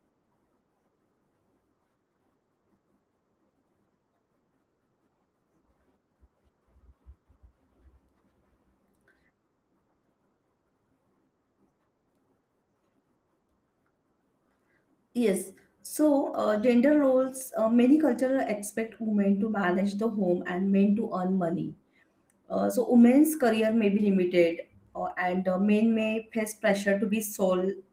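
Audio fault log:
No faults heard in this speech recording.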